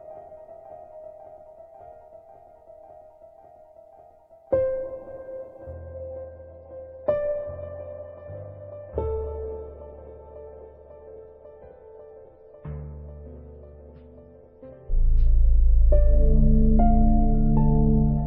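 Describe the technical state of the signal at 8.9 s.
At 8.9 s we're inside the adaptive stream at a lower bitrate, running from 5.73 s to the end. The connection slowed, so the stream switched abruptly, without a gap, to a much leaner encode. Codec artefacts rise, consistent with roughly 24 kbit/s MP3 after about 128 before.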